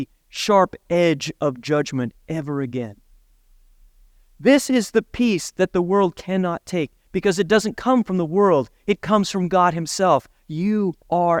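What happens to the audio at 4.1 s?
Nothing goes wrong at 4.1 s; the speech continues intact through that moment.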